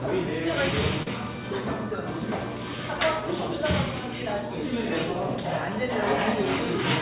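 From start to finish the sound carries clock drift between sender and receiver: the sending device's clock runs around 3 percent slow compared with the receiver's, so samples arrive a little late and the jitter buffer keeps drifting toward empty. On a waveform this is not one visible event. It shows up as a slow, uneven loosening of timing across the whole clip, with the spacing of transients gradually lagging where they should fall.

From 0.41 s to the end, the receiver makes repeated timing corrections to cope with that slow supply. It keeps inserting short repeated slivers of audio, all in the same lengthening direction and at irregular intervals. This plays the material at an effective 97 percent speed and adds about a fifth of a second overall. It is heard as a faintly dragging, slightly hiccupy pace. A spectrogram shows tiny duplicated slices, with brief vertical seams where a patch was spliced in.

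Between 1.03 s and 1.08 s there is a short stall from a late packet. The buffer ran dry, so the receiver held the last bit of sound for 39 ms until the packet arrived, then carried on without losing anything. This added 39 ms of delay. It is heard as a brief smeared sustain with a slight buzzy or dipped quality. In the spectrogram it appears as a short stretch of frozen, horizontally streaked energy, and in the waveform as a repeated, flattened cycle pattern. This sits within the G.711 call path, whose narrow band leaves nothing above 4 kHz.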